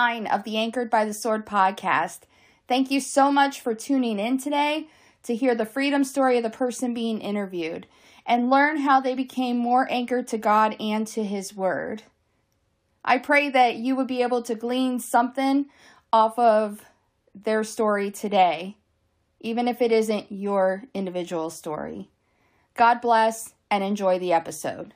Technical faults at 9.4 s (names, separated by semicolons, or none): none